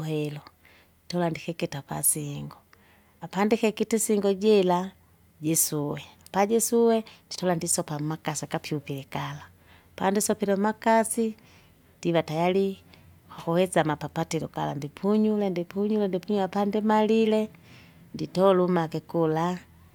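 No technical faults can be heard anywhere in this speech recording.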